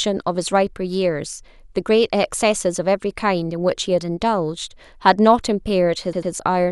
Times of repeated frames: 6.13-6.32

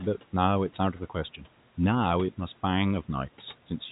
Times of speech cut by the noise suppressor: 0.78-1.46

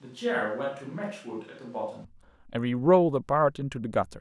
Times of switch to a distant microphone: 0.00-2.04

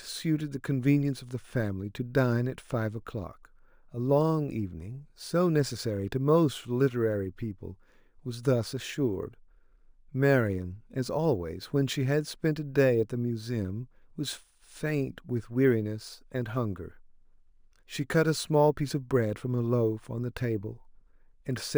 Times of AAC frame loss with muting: none

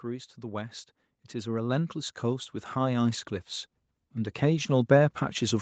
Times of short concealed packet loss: none

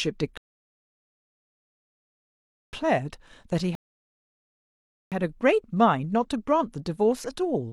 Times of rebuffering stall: 0.37-2.73, 3.75-5.12

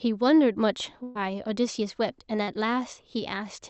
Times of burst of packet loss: 1.03-1.17

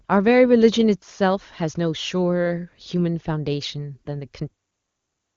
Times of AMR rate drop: none

